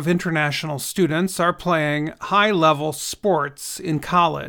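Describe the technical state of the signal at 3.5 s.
At 3.5 s the speech signal is intact, with no audible technical fault at that moment.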